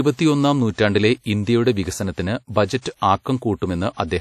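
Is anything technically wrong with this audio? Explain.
Yes, there are two faults. Throughout the clip the speech has plainly audible coding damage: a ringing, washy quality and a hiss that rises and falls with the signal, with no content above 14.6 kHz. This is likely WMA compression, a transform codec that spreads quantisation noise across each block and zeroes weaker spectral lines. The amount of damage fits a low bitrate of around 48 kbps.

From 2.81 to 2.85 s there is pre-echo. A sharp attack falls late in a coding block, so noise sized for the loud onset also fills the quiet stretch before it. The result is about 42 ms of hiss leading into the attack, which sounds softened and smeared rather than crisp.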